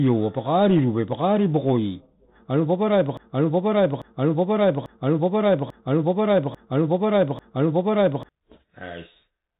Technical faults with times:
0.00-9.60 Bluetooth CVSD headset codec
3.17-8.29 broken-record loop

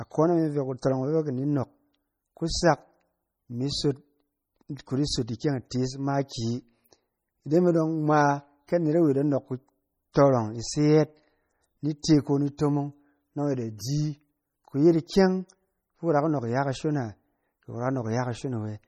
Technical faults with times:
0.00-18.87 MP3 compression

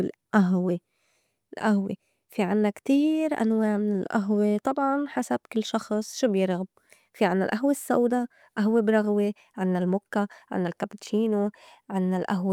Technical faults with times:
none

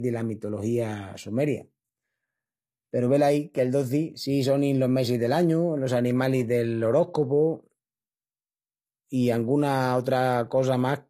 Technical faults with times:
0.00-11.10 low-bitrate audio saved at a high bitrate

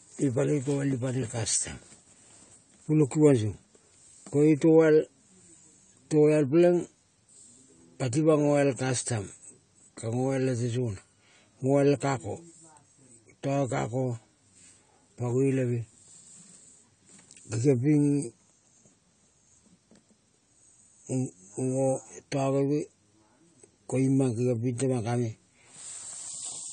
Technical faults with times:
0.00-26.72 AAC compression

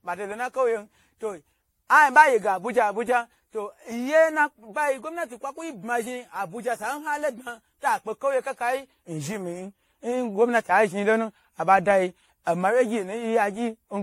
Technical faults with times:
0.00-14.02 generation loss

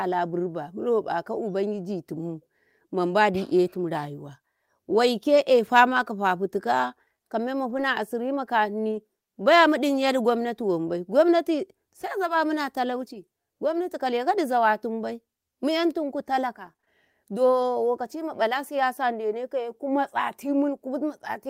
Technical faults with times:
5.37-5.39 lost packet rebuilt from error correction
7.69-7.83 lost packet rebuilt from error correction
8.91-8.97 lost packet rebuilt from error correction
16.65-20.11 scattered short gaps

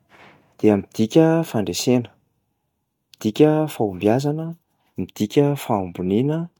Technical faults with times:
none

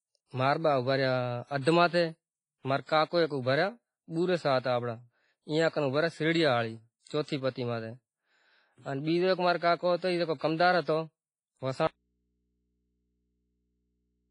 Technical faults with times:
0.00-14.30 WMA compression
11.87-14.30 audio dropout to a faint residue

